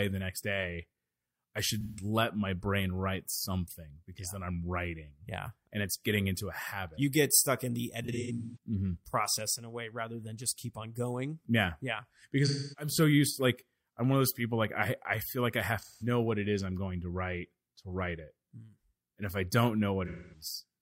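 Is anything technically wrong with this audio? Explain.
Yes. AAC frame loss with concealment occurs five times: 1.81–2.04 s (after "I should", before "let my brain write"), 8.04–8.57 s, 12.47–12.92 s (before "so used to like"), 15.79–16.07 s (after "I feel like I", before "what it is I'm") and 20.06–20.45 s. Compressed frames went missing, and the decoder filled each gap by reusing the last good spectrum. The speech turns smeared or noisy, with roughly 170 to 340 ms lost in each event. The 8.04 s loss is scattered across about half a second, with its longest run around 150 ms.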